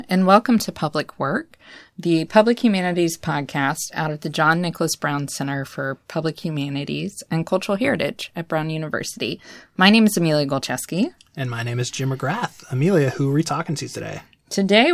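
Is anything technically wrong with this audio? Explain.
No, nothing technically wrong stood out on listening to this speech recording.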